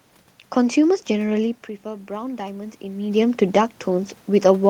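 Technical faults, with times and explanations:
1.82 to 4.15 s, automatic gain rising: The speech level at the microphone falls by about 12 dB after the talker moves back, around 1.5 s. The automatic gain control reads this as a quiet input and slowly turns its gain up, by about 4 dB over more than two seconds. Because the whole signal is amplified, the voice and the room noise swell together. This slow, shared rise is what makes it the gain control.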